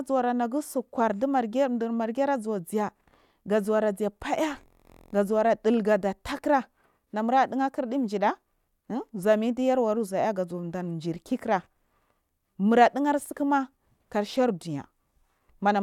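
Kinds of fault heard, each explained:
No kinds of fault are heard in this speech, so there is none to explain.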